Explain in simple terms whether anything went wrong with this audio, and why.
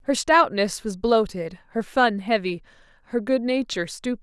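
Nothing went wrong here.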